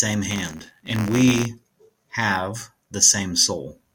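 From 0.30 s to 1.45 s the speech carries a rattling, robotic buzz at about 86 Hz. This is buffer tearing: writer and hardware have slipped, so each period of the 512-sample buffer splices in a small slice of audio roughly 20 ms stale.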